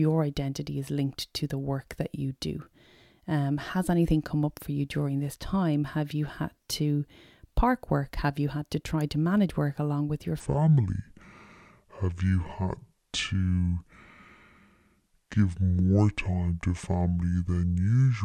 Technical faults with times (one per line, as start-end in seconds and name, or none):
10.40-18.24 section at the wrong speed